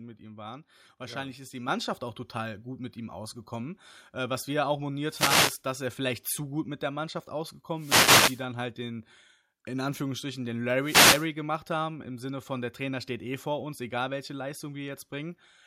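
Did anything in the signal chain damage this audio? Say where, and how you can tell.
Yes. At about 1.68 s, between "ja ist die" and "auch total gut mit", the whole signal jumps up by about 7 dB in a single step. The voice and the room noise behind it rise together, mid-sentence, with no fade. That points to call processing: the microphone volume stepped up. Automatic gain control judged the input too quiet and raised the device's input level at once, so everything captured afterwards arrives louder.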